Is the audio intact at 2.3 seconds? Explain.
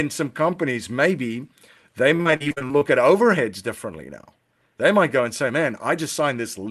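No. At 2.3 s the speech sits inside a stretch of repeated packet loss (robotic sound), from 2.09 to 2.83 s. Eleven holes, the longest 43 ms, are patched by stretching the preceding sound, so over a third of that span is concealment. It sounds choppy, with pieces missing. A spectrogram shows smeared, frozen harmonic bands with abrupt breaks, and the waveform shows repeated segments.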